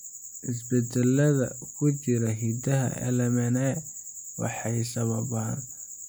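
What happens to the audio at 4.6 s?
Nothing goes wrong at 4.6 s; the speech continues intact through that moment with no dropout, click or distortion.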